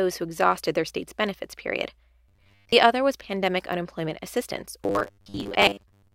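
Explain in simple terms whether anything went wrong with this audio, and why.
The speech turns robotic twice: from 2.29 to 2.73 s, between "their state's benefits period" and "other was", and again from 4.84 s to the end. Both times the voice becomes a stiff, metallic buzz pitched at 100 Hz. This is robotic sound from repeated short buffers, likely caused by the playback repeating one 10 ms chunk while most of the real audio is skipped. Unlike a dropout, the sound never goes silent, and the words still roughly come through.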